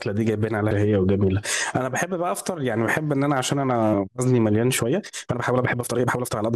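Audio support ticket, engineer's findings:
Time-stretched section, 4.77 s to 6.56 s (end of clip): speech suddenly runs about 1.66x faster, rushed, pitch unchanged. Likely an editing or length-fitting stretch dropping short segments to compress time. Pitch holds steady, ruling out a sample-rate or playback-speed mismatch, which would raise pitch along with pace.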